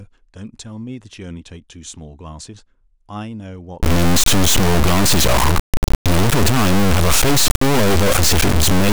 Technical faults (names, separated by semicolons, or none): integer read as float